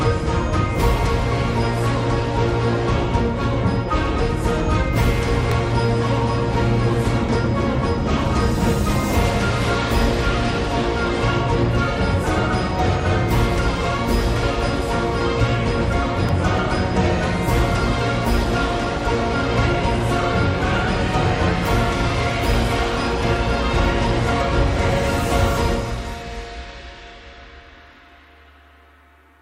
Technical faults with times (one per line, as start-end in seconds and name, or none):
5.51 electrical switching spike
16.29 electrical switching spike